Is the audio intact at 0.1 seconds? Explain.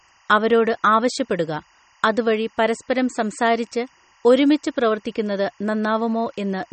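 No. At 0.1 s a faint, steady chirping warble sits about 35 dB below the speech. This is timecode bleed running through the whole clip: linear timecode at 24 frames per second leaking in from a neighbouring line, its square wave flipping between roughly 1 and 2 kHz.

The speech itself sounds watery and swirly, with nothing above 8.4 kHz. That fits a starved encode, likely MP3 compression at around 32 kbps, where the encoder cuts the treble at a fixed point and drops weak frequency lines that flicker on and off between frames.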